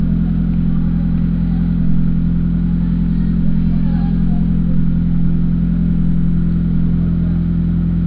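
No technical faults can be heard anywhere in the signal.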